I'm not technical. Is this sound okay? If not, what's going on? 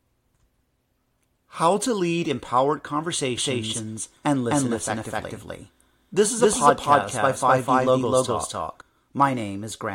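No. From 3.37 to 8.81 s there's a doubled audio track. The speech plays twice, with a second, equally loud copy about a third of a second behind, likely from a second, slower recording path.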